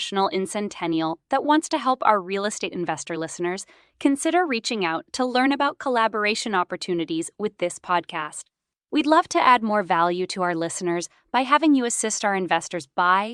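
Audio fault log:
No faults are heard in this speech clip. Nothing in the audio calls for an entry in the log.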